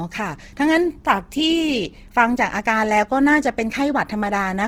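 Throughout the speech, the sound is grainy and rough, with a noisy, hissy texture on the higher sounds. This is likely Opus compression in its CELT music mode, filling starved bands with noise, which fits a low bitrate near 16 kbps.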